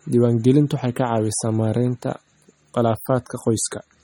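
Throughout the speech, MP3 compression damage is plainly audible, likely from a low bitrate, which fits about 32 kbps. Weak frequency lines drop in and out from frame to frame, giving a watery, swirling texture, and nothing is present above 18.6 kHz.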